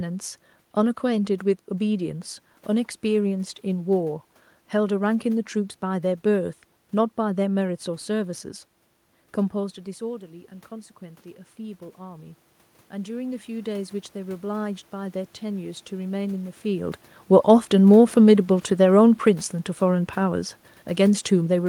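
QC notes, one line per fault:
9.98 to 16.99 s, automatic gain rising: after the input falls about 13 dB when the talker moves away before 10 s, the gain control climbs about 9 dB over seven seconds, lifting the room noise with the voice, unlike a talker moving closer.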